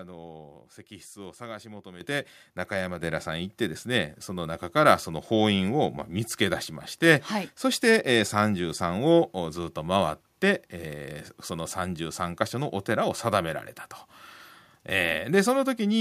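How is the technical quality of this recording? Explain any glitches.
The recording has two level jumps. Microphone volume stepped up at 2.01 s by about 9 dB, then at 3.03 s by about 6 dB. Software raised input gain, so speech and background jump together.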